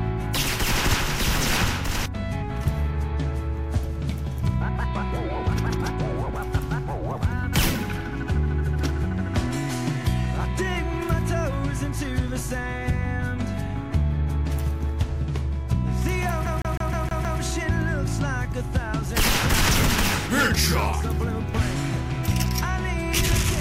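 At 16.46 s the playback catches on a CD stuck on one turn, a scratch knocking the laser back a track each revolution. About 156 ms of sound loops six times, with a tiny mute at every jump, giving that quick, even skipping-disc stutter until 17.40 s.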